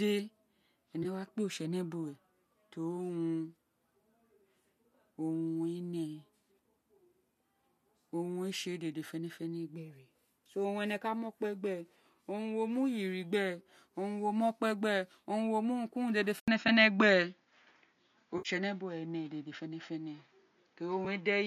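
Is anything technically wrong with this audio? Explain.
Yes, there are two kinds of fault.

AAC frame loss with concealment occurs at 1.03–1.06 s (20 ms), 16.68 s, 18.38–18.49 s (70 ms) and 21.05 s. The decoder fills each missing frame from the last good spectrum, producing brief smeared, noisy or phasey patches.

At 16.40 s there is a short silence of about 80 ms, then the sound turns duller through to the end, with nothing above 7 kHz, a small level shift and a faint new noise floor well below the signal. This is likely an input switched to a poorer device.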